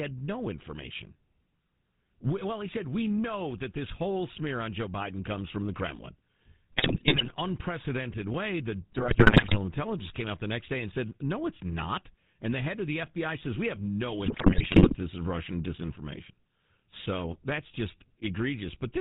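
Throughout, the speech carries the sound of the GSM full-rate codec: nothing survives above 4 kHz, and the voice has a buzzy, gravelly edge. That comes from modelling the vocal tract and exciting it with sparse, regularly spaced pulses, a plainly audible loss consistent with 13 kbps.

GSM bit errors break in from 6.73 to 7.34 s, 8.92 to 9.57 s and 14.26 to 14.95 s. Corrupted filter, pitch and gain values distort the spectrum and spike the level frame by frame, turning the voice into squawks, pops and gargling. The last burst is the harshest.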